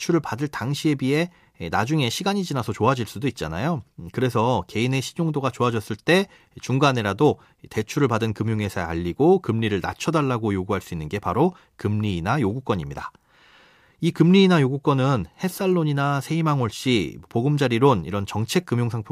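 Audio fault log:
No faults heard.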